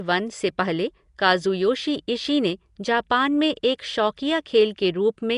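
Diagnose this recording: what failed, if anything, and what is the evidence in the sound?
Throughout, the speech has a rough, hissy halo and a smeared, underwater quality, with nothing above 10.6 kHz. The stage is the codec, likely Nellymoser compression: its fixed two bits per sample leave weak bands empty and fill them with noise, consistent with a stream of about 44 kbps.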